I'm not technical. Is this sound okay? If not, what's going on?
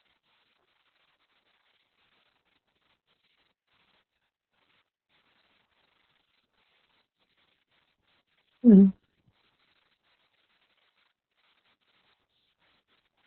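No. The speech sounds muffled, hoarse and slightly robotic throughout, because heavy Opus voice compression squeezed it into a narrow, telephone-like band and coded it coarsely.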